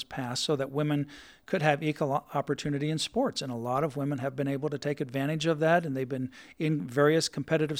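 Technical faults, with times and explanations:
No technical faults heard.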